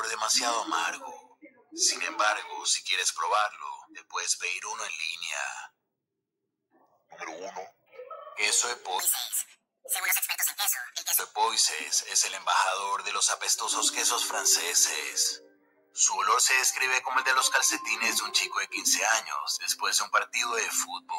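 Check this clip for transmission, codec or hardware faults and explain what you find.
Two kinds of fault appear: a noise suppressor cutting into wanted sound three times, and one passage running at the wrong speed.

The sound cut by the noise suppressor comes at 1.17–1.74 s, 3.85–4.13 s and 15.48–15.96 s, each a fraction of a second, sinking by about 19, 17 and 18 dB. The suppressor mistook wanted sound for noise. Unlike a dropout, the level ducks rather than vanishing.

The section at the wrong speed, 8.99–11.19 s, plays 1.71 times fast, pitch rising roughly ten semitones and everything hurried. The likely cause is an editor or player fitting it to the wrong clock. A pitch-shift fault would change pitch without the rushed timing.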